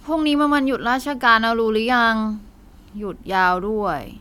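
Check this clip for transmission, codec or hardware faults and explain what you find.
No transmission, codec or hardware fault is audible in this speech recording.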